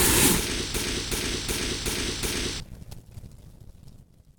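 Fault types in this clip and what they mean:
system hang loop: The computer or driver stalled while the sound hardware kept replaying its ring buffer, so from 0.74 to 2.60 s one 0.37 s slice, consistent with a 16384-sample buffer, repeats five times at 2.69 Hz, a slow stutter replacing roughly two seconds of audio.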